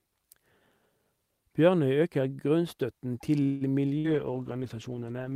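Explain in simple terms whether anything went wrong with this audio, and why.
Yes, three things went wrong, all near the end of the speech.

Call audio freeze: Packets were likely held up on the way, so the receiver ran out of sound to play. From 3.43 to 3.76 s, the last sound is stretched into a brief fading buzz or hiss. The speech then carries on where it stopped, about 0.17 s late, with nothing lost.

Call bitrate drop: The connection seemed to get slower, so the call was told to send far less detail. From 3.92 s to the end, the voice sounds rougher and more muffled, because fine detail and the crisp top end are thrown away.

Burst of packet loss: A short run of the call's data never arrived in time, from 3.98 to 4.07 s. The receiver filled the gap by holding and fading the last sound, then jumped ahead, so about 60 ms of speech is simply missing.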